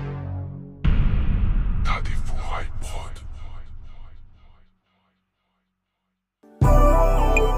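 No technical fault can be heard anywhere in this recording. The sound stays steady throughout, with nothing that points to a problem in how it was captured or delivered.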